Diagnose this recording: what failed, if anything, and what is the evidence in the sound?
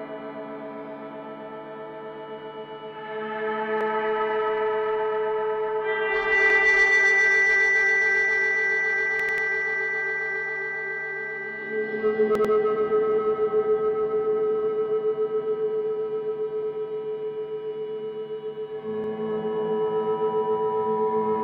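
Short stutters at 3.81, 6.50, 9.20, 12.35, 16.63 and 19.04 s replay a 93 ms slice with hard joins: a driver-stage repeated buffer, fitting 4096 samples.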